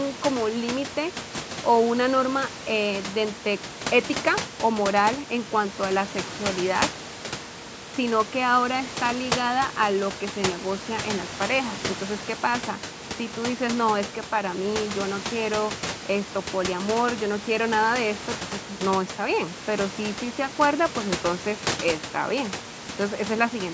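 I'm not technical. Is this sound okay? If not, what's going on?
Yes, there is nothing wrong with this recording.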